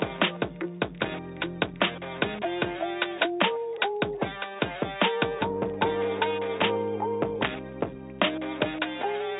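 Nothing stood out on listening to this recording.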